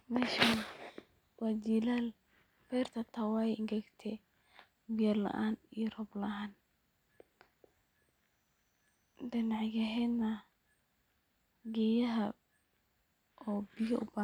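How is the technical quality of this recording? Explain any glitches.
No technical faults are audible.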